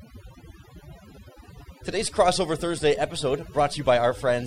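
From start to finish the speech carries overdone noise removal. A noise reduction stage has been driven too hard, so individual frequency bands are pulled far down or switched off whenever their level sits close to the estimated noise floor, and the quieter parts of the voice are removed along with the noise. The background collapses to near silence dotted with twinkling, metallic specks.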